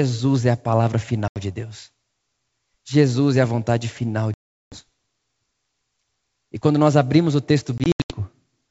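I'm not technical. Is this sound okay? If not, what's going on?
No. There is packet loss on an ADPCM call: sound drops to abrupt silence at 1.28 s after "é a palavra", for 380 ms at 4.34 s after "é a vontade final", and in broken gaps from 7.78 to 8.19 s after "quando nós abrimos o". Each time the speech resumes, the decoder has lost track of the sender, so it comes back slightly distorted, then settles.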